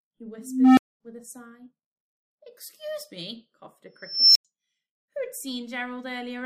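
Two unstable filter blowups: at 0.38 s a low tone around 300 Hz swells for 0.39 s into clipping, then drops out for 0.23 s. At 4.01 s a high squeal near 5 kHz builds over 0.34 s, then cuts for 0.09 s, a recursive filter running away until it overflows and resets.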